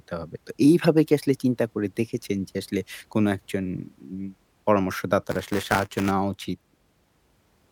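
At 0.84 s, a corrupt frame is decoded. Damaged bits in a couple of compressed frames were played anyway, so energy lands at the wrong frequencies. The speech gets a brief chirp-like blip, peaking at about -20 dBFS, gone almost instantly.

From 5.31 to 6.11 s, buffer tearing sets in. The writer and reader of the ring buffer cross inside each period. A small slice of every buffer repeats audio about 10 ms old, with hard joins. The result is a robotic 188 Hz buzz, which fits a 256-sample buffer.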